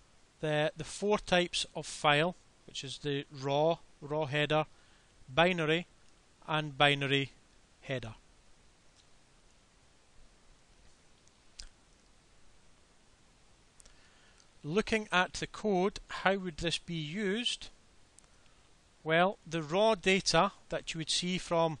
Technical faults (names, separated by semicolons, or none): none